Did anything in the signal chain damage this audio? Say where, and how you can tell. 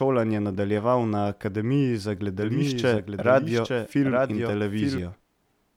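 Yes. From 2.40 to 4.98 s a doubled audio track appears: a dry copy about 5 dB quieter trails about a second behind, likely from a second, slower capture path.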